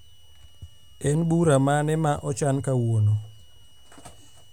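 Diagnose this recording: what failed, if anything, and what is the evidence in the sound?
A switching power supply feeding the analogue stage is running in an audible burst mode, so a switching power supply whistle is coupled into the speech path for the whole clip. It sounds like a thin, high whistle near 3 kHz, wandering between 2.89 and 2.95 kHz as the supply's load shifts. It sits around 35 dB below the speech, quiet but steady.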